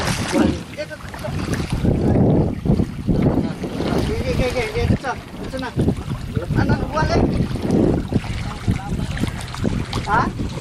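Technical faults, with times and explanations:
No technical faults detected in the audio.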